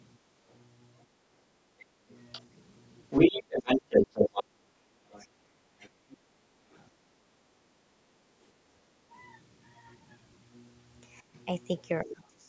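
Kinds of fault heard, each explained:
Other side's voice leaking through: A second voice is audible from 0.47 to 6.87 s, running well above the talker, roughly 10 dB louder, and again from 11.35 to 12.27 s as a faint trace about 30 dB down. The likely cause is the far end's loudspeaker playback reaching the microphone and surviving the echo canceller, so the remote talker is re-sent into the call alongside the near-end talker.
Background gated by the echo canceller: The room sound ducks by about 10 dB in two spans, 1.09 to 2.09 s and 4.84 to 5.66 s, each totalling around 0.3 s of audible dips rather than a steady drop. This is the echo canceller's suppressor clamping the microphone while it detects loudspeaker output, then releasing, so the ambience pumps down and back up in short bursts.
Speech suppressed in double talk: The talker's own level falls in pieces at 1.45 to 1.54 s, 3.43 to 5.82 s, 8.7 to 9.13 s and 11.2 s to the end, with drops of roughly 15 dB early on, deepening to about 20 dB and finally around 30 dB. 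The likely cause is the canceller failing to separate near-end speech from echo while both sides talk, attenuating everything together.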